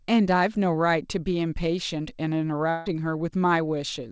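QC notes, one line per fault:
2.70–2.88 s, long network dropout: for about 0.16 s the speech is replaced by a buzz- or hiss-like continuation of the preceding sound that fades without reaching silence, then the talker resumes with about 0.16 s of material gone. The likely cause is a burst of lost packets, with the receiver filling the hole by stretching the last audio it had. The fill shares the call's band limit, nothing above 8 kHz, which fits G.722 at 64 kbps.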